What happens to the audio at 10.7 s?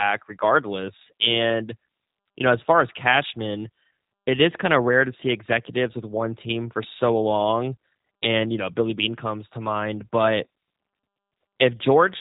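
At 10.7 s the speech carries G.729 codec damage, present throughout. Rebuilt from filter and pulse models, it sounds rough and synthetic, with nothing above 3.8 kHz.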